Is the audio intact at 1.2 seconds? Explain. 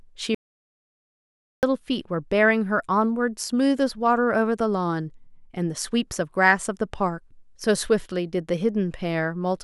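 No. At 1.2 seconds the speech is inside an audio dropout to silence running from 0.35 to 1.63 s. The sound cuts off abruptly into silence, with no room tone. It then resumes mid-flow. About 1.28 s of speech is gone. The likely cause is a lost input while the recorder kept writing silence.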